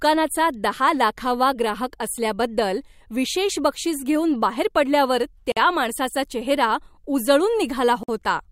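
At 5.52 s, between "बक्षीस घेऊन बाहेर पडल्यावर" and "माणसाचा चेहरा", the speech drops out for about 48 ms, and again at 8.03 s for about 51 ms. Both are gaps at a join of encoded pieces: separately encoded segments were spliced without removing each encoder's leading delay and final-frame padding. Each gap is a short, abrupt silence with smeared edges, after which the speech resumes exactly where it stopped.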